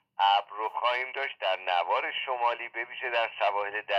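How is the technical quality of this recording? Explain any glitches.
Nothing here gives me any trouble, since the sound holds steady the whole way through and there isn't a single glitch to point to.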